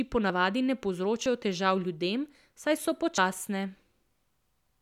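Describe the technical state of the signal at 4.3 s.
At 4.3 s the speech signal is intact, with no dropout, clipping, distortion or other fault to be heard at that moment.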